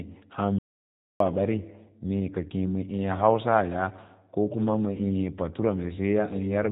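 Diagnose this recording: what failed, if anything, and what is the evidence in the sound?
Codec stage: the G.729 codec leaves speech rough and synthetic throughout. The spectrogram shows a hard ceiling near 4 kHz, which fits an 8 kbit/s voice codec.

Playback stage: a playback stall silences the audio from 0.59 to 1.20 s, a flat 0.62 s gap in the waveform. The likely cause is the player's buffer running dry before resuming.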